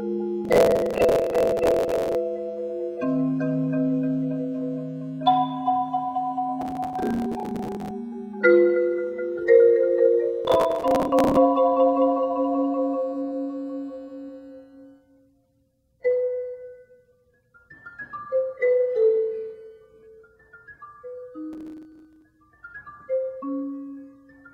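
Gritty bursts of crackle tear across the sound at 0.45–2.15, 6.61–7.91, 10.45–11.37 and 21.53–22.22 s: processor overload crackle. Many deadlines are missed in a row, with short stale fragments replayed, the grain fitting buffers of around 10 ms.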